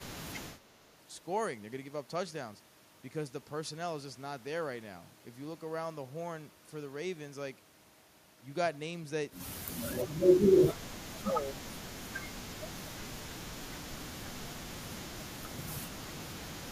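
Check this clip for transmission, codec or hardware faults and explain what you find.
The speech drops sharply in level at six points: 0 to 0.61 s, 9.83 to 10.09 s, 10.26 to 11.59 s, 12.56 to 14.58 s, 14.8 to 15.38 s, and 15.74 s to the end. Each dip cuts the speech by roughly 20 to 30 dB, the deepest near 11 s. The likely cause is speech suppressed in double talk: with both ends talking, the echo canceller mistakes near-end speech for loudspeaker echo and attenuates it.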